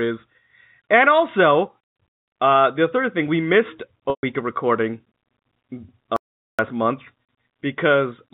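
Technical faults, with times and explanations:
4.10–4.23 s, packet loss with pitch repetition: about 130 ms is missing between "third thing we missed" and "of recording". The receiver fills the gap by repeating the last pitch period, which gives a briefly held, buzzy tone that fades out over about 50 ms, then a short cross-fade back into the speech.
6.16–6.59 s, audio dropout to silence: the sound cuts off and returns mid-flow after about 0.42 s of silence with no room tone. The recorder likely kept writing silence while its input was lost, so that stretch of audio is gone. The G.711 telephone band limit continues on either side.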